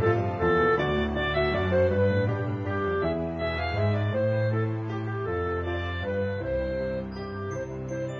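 No technical faults are audible.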